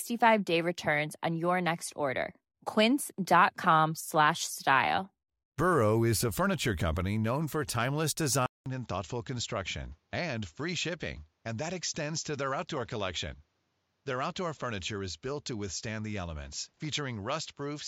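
Input switched to a poorer device at 8.46 s, just after "company known for timeless", and the change lasts to the end of the clip. The recording likely moved to a different, lower-quality microphone or headset path. A gap of about 200 ms marks the switch; after it the speech loses everything above 7.6 kHz and sounds duller, drops roughly 5 dB in level, and carries a new, faint background noise well below the speech.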